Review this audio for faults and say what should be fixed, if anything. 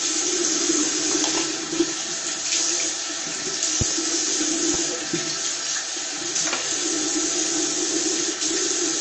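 Heavy lossy encoding, likely MP3 at a rate that points to roughly 32 kbps, left the encoder too few bits, so it cut the treble and dropped weaker frequency lines from frame to frame. Throughout the clip, nothing remains above about 8.3 kHz, giving a dull, band-limited tone, and the shifting gaps between frames make the MP3 compression plainly audible as a watery, swirling texture with smeared attacks. To prevent it, keep a lossless master or encode at a much higher bitrate.

An electrical transient, likely a sudden voltage step from a connector, switch or static discharge, was added on top of the signal. It is heard as a loud pop, really a double pop from 3.81 to 3.94 s, standing well above the surrounding sound, and then a single, milder pop from 4.74 to 4.77 s that rises only a few dB above it, with the sound continuing underneath both. To prevent it, secure cables and ground the equipment, and avoid switching or plugging anything in while recording.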